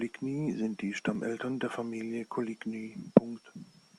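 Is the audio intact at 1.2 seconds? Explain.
No. Just before that point, at 1.15 s, there is an overlap between stream segments. Two adjacent pieces of the stream carried timestamps that overlapped, which fits segments about 2 s long, and the player trimmed the overlap as if it were duplicated. That audio was not actually doubled, so about 10 ms of speech was discarded. The waveform jumps across the gap, producing a brief click or tiny skip in the speech.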